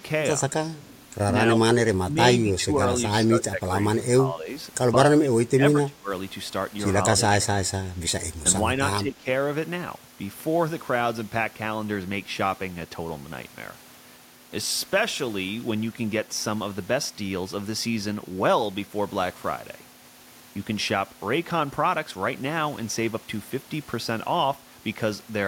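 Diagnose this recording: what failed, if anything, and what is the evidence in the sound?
Call processing failed. The speech dips at 0.49–0.75, 1.85–2.78, 3.14–4.5, 4.92–6.1, 7.16–7.51 and 8.78–9.27 s, dropping up to about 25 dB. The likely cause is speech suppressed in double talk. The echo canceller mistook overlapping speech for echo and turned the talker down.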